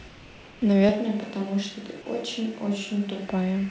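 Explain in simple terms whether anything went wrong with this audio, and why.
Two things went wrong here.

From 0.08 to 0.62 s you get comfort noise in place of the background. The real room sound drops out and is replaced by a flat, even hiss that's a touch quieter and has none of the little details of the actual background. That's most likely the call's sender going silent when it thought nobody was talking, with the receiving end filling the gap with made-up noise shaped to sound roughly like the room.

Then from 0.89 to 3.28 s there's a switch to a distant microphone. The sound suddenly gets roomier and more hollow, a bit quieter, and you hear more of the space around it, with the room noise sitting noticeably closer to the speech. Then it snaps back just as abruptly. The likely cause is that the close mic's signal dropped out and a mic further away, something like a camera's, took over. 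Throughout, the top end stops at 8 kHz, which is just how this call codec carries audio.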